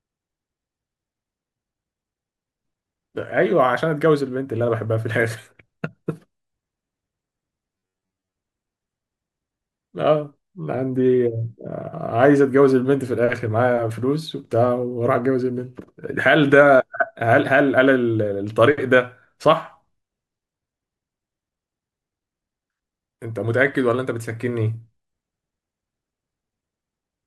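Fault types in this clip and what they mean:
Robotic sound from repeated short buffers: from 7.76 to 8.37 s the speech becomes a rigid metallic buzz near 94 Hz that loosely follows the words, likely an 11 ms buffer replayed to cover late audio, with most of that stretch repeated material.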